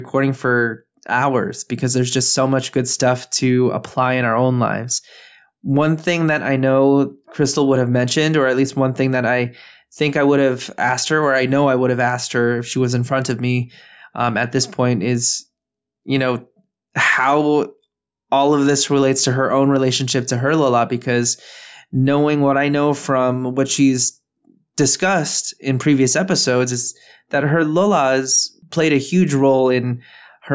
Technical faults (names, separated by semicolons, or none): none